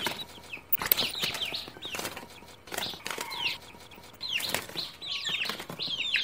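DAB burbling appears from 0.72 to 1.16 s and again, more lightly, from 3.86 to 4.16 s. Bit errors, under one percent and fewer in the second burst, slip past error correction and corrupt the MP2 data, making individual sub-bands blip with noise or jump in level for up to a frame.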